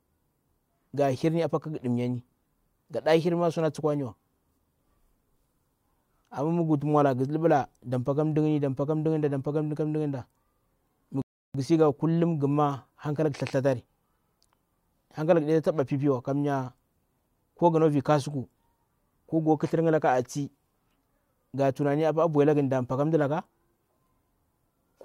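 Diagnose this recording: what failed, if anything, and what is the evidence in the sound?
Playback rebuffering stall: the player's buffer ran dry, silencing the speech from 11.22 to 11.54 s; it resumes intact at "ghu sii", 0.33 s late.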